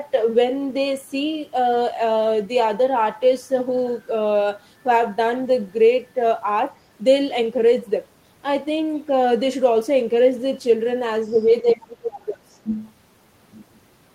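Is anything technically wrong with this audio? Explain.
Yes. Two related problems show up near the end of the clip.

The other side's voice leaks through twice: a brief scrap from 11.33 to 11.39 s and another from 12.71 to 12.77 s. Both are faint, around 30 to 35 dB below the speech. The likely cause is an echo canceller that left some of the far end's loudspeaker sound in the microphone signal. Unlike room reverberation, which smears the talker's own voice, this is a second, separate voice.

Speech is suppressed in double talk from 11.62 to 12.44 s, dipping by up to about 20 dB, and again from 12.63 to 12.71 s, dropping by about 25 dB. While both sides were talking, the echo canceller likely could not separate the local talker from the echo and turned everything down. Unlike a network dropout, which produces abrupt silence, this sounds like the talker's own voice being ducked, and it clusters around the moments of echo.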